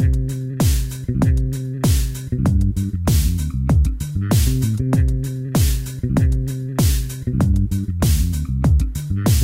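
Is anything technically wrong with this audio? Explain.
No technical faults are audible.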